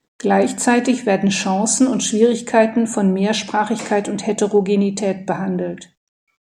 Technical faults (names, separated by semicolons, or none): clock slip clicks